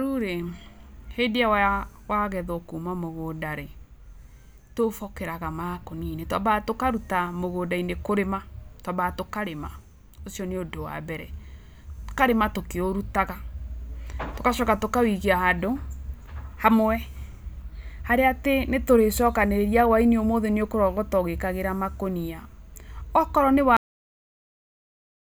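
A speech recording that stops abruptly at 23.77 s, mid-sound, dropping straight into digital silence for the remaining 1.5 s with no natural decay or room tail. This is a cut-off end: the final buffers of audio were never written to the file or sent to playback, so the sound is severed in progress rather than fading or finishing, and everything after the cut point is empty.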